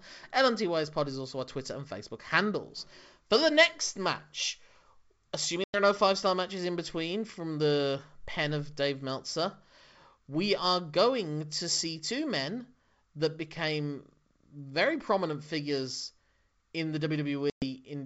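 Packet loss on an ADPCM call drops about 100 ms at 5.64 to 5.77 s and 120 ms at 17.50 to 17.65 s, just after "in the". Each time a handful of packets vanish and leave hard-edged silence. The decoder's predictor and step size then resume out of step, so the speech briefly returns slightly distorted.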